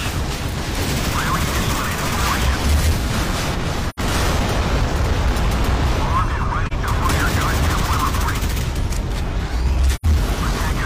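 AAC frame loss with muting at 3.89–4.00, 6.67–6.73 and 9.95–10.06 s: the decoder zeroes missing frames, leaving soft-faded gaps of about 85, 43 and 85 ms in the audio.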